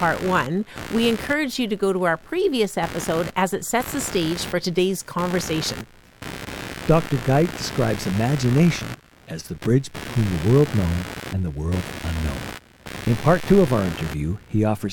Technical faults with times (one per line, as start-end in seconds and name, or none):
0.00-14.92 computer activity noise